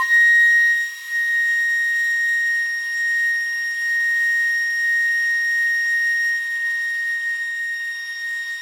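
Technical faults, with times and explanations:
No technical faults can be heard in the music; the signal stays continuous and stable from the first moment to the last.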